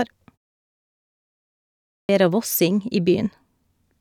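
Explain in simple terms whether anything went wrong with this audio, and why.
There is a clipped start after a pause at 1.71 s. A silence of about 1.4 s comes first, and the playback device appears to go idle during it. When speech resumes, the device needs time to wake up and lock on again, so about 0.38 s of sound, up to 2.09 s, is swallowed. The phrase "vera vossing" therefore begins abruptly, missing its opening sounds.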